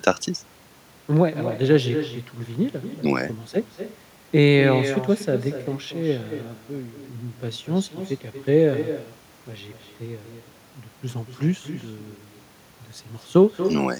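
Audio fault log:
throughout: echo with no canceller. Every phrase of the speech is trailed, around a fifth of a second later, by a fainter, thinner copy sitting about 10 dB below the direct sound. The far end is playing the call through a loudspeaker, its microphone captures that playback, and no echo cancellation strips it out. The returned signal arrives after the network round trip.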